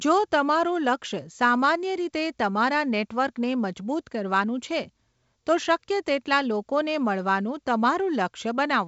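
The speech carries the band-limited sound of G.722 wideband telephone coding, with nothing above 7.7 kHz and a light coding texture consistent with the 56 kbit/s mode, and no technical faults can be heard.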